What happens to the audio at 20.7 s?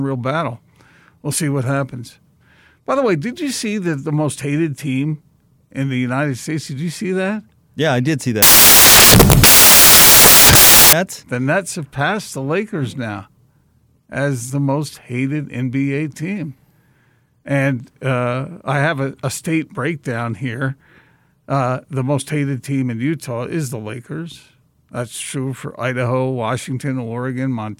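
Nothing goes wrong at 20.7 s; the speech carries on intact through that moment, with no dropout, click, distortion or other fault to be heard.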